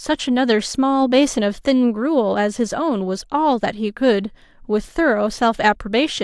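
Speech with no audible faults.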